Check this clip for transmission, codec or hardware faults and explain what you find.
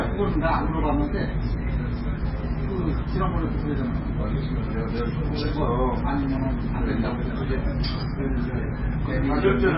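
There is one fault, present throughout the clip: heavy MP3 compression. Nothing reaches above 5.5 kHz, so the audio sounds dull and boxed in. The remaining detail sounds watery and swirling, and attacks are smeared. This is likely from encoding at a very low bitrate, around 16 kbps. Starved of bits, the encoder cuts all treble at a fixed point. It also drops weaker frequency components, which flicker in and out between frames.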